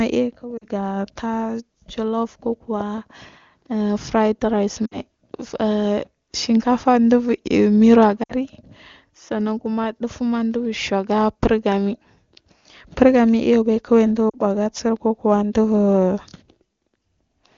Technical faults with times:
0.57-0.66 lost AMR speech frames
4.86-4.98 lost AMR speech frames
8.23-8.33 lost AMR speech frames
14.29-14.37 lost AMR speech frames

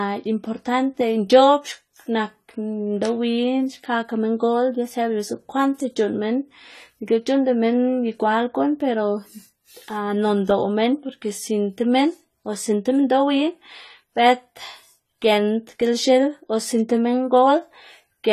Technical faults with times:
0.00-18.32 AAC compression

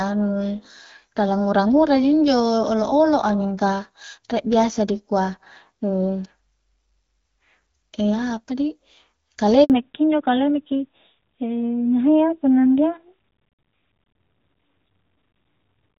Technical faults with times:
9.64-9.70 handover gap
9.70-15.98 fallback to narrowband

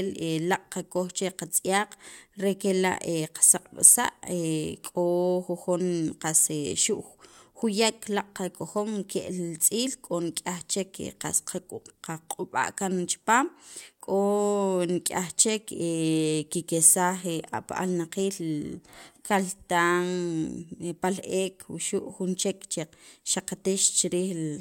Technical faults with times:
none

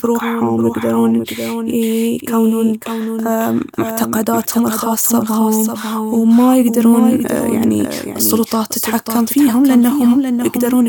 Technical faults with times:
0.00-10.88 doubled audio track

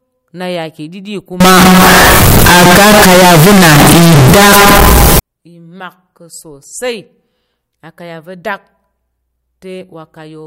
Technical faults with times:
1.40-5.19 float read as integer

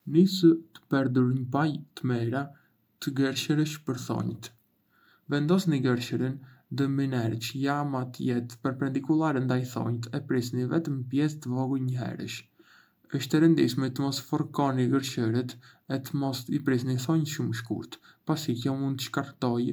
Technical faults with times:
none

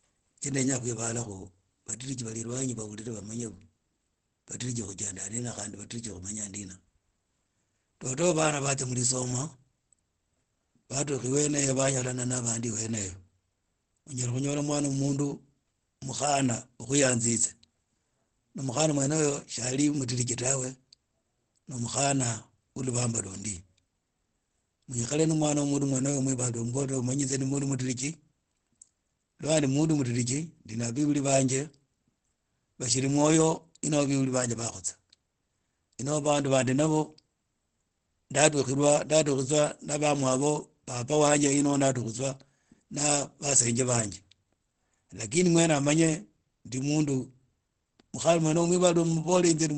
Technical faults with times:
0.00-49.78 Opus compression

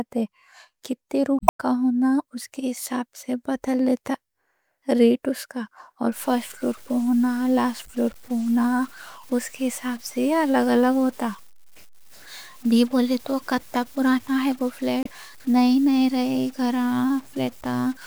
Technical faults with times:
1.37-1.60 damaged data in a compressed stream
6.12-18.06 stuck bit
15.02-15.07 damaged data in a compressed stream

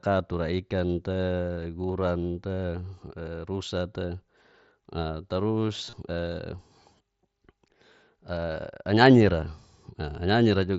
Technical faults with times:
5.85-5.93 concealed Bluetooth headset packet loss

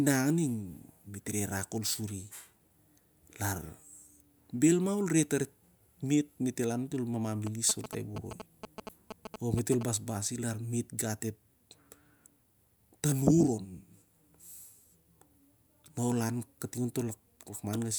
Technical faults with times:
7.47-9.83 GSM signalling bursts

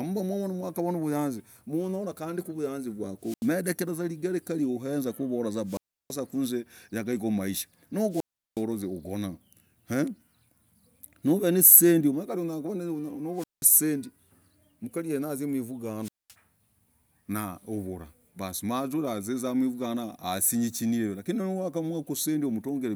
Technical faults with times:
3.21-3.52 wireless microphone squelch dropout
5.65-6.17 wireless microphone squelch dropout
8.10-8.64 wireless microphone squelch dropout
13.34-13.68 wireless microphone squelch dropout
16.01-16.35 wireless microphone squelch dropout

